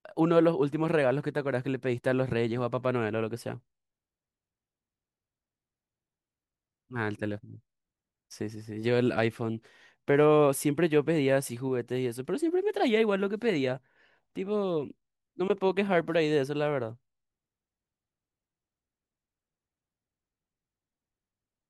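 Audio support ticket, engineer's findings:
Listened to the whole speech recording and found nothing wrong on playback, so there's no fault to log or chase down on this one.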